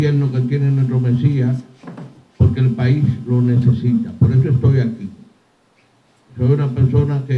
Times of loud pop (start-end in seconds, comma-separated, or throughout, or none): none